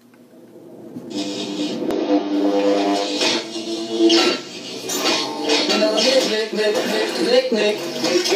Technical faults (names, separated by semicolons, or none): damaged data in a compressed stream